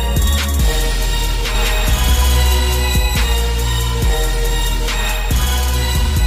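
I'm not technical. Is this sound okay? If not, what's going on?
No. From 1.55 to 3.33 seconds there is a doubled audio track. A second, equally loud copy trails about a fifth of a second behind, likely from a duplicated recording path.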